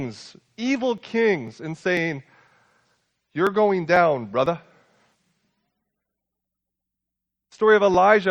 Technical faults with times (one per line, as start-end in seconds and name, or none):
0.48-7.94 periodic USB or driver dropouts